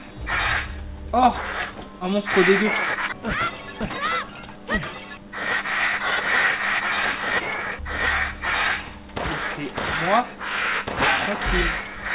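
No technical faults can be heard anywhere in this audio.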